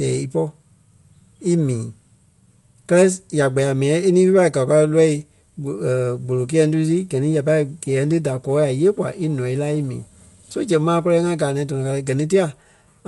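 A speech recording, damaged from start to finish. Nothing is heard above 11.4 kHz, so it sounds dull. A rough, fluttering noise clings to the voiced sounds. This is likely Dolby Digital compression, where sparse bits leave gaps filled with noise, consistent with about 64 kbps.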